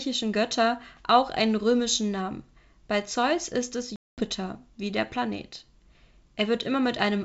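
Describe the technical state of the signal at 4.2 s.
Packet loss on an ADPCM call covers 3.96 to 4.21 s, between "ist es" and "wie der", and 4.2 s falls at the very end of that hole. About 220 ms of sound is missing, which fits roughly ten lost packets, and the gap is filled with hard-edged silence. Because the receiving decoder's adaptive predictor and step size have drifted from the sender's, the speech resumes slightly distorted, settling within some tens of milliseconds over the G.722 wideband link.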